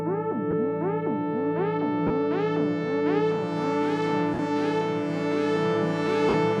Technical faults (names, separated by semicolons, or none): lost LE Audio frames